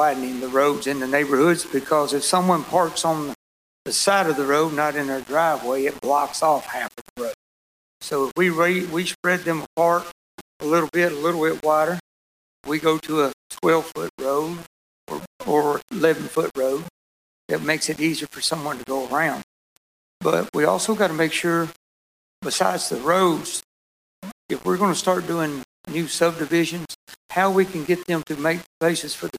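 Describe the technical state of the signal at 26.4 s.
At 26.4 s the sound carries the grainy, signal-following distortion of low bit depth without dither, present across the whole clip rather than at this moment alone. It is likely a 6-bit rounding with no dither, leaving error roughly 20 dB below the signal, so quiet passages turn gritty and fade into sputter. A waveform shows visible staircase steps; a spectrogram shows a broadband haze that rises and falls with the level.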